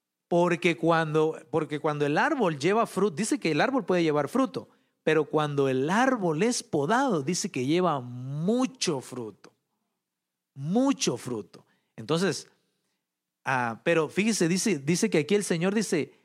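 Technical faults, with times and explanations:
No technical faults can be heard, so there are no times or explanations to give.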